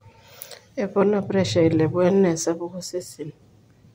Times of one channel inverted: none

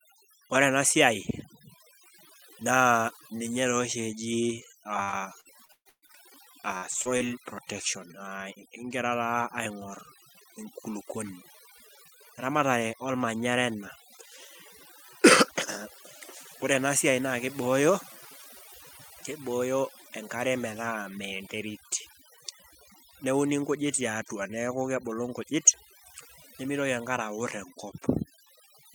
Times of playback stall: none

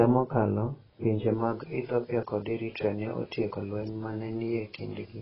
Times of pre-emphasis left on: 1.34-5.21

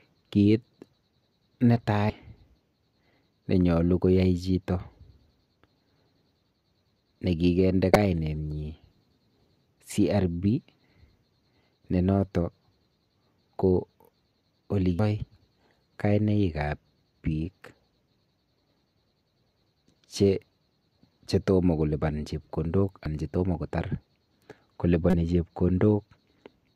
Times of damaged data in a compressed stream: 2.09, 7.93-7.96, 14.99, 23.05, 25.10-25.14

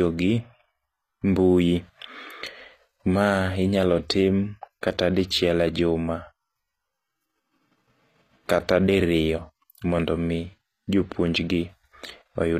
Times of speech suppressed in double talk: none

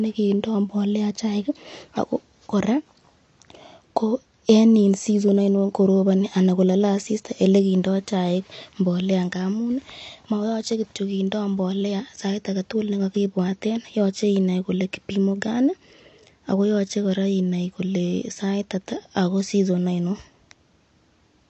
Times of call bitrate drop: none

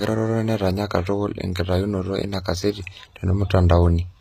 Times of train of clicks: none

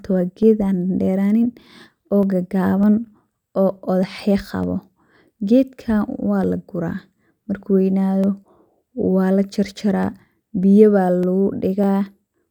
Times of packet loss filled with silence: none

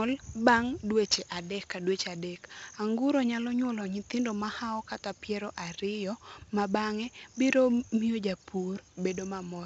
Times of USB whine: none

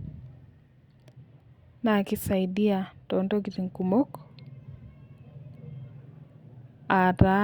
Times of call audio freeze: none

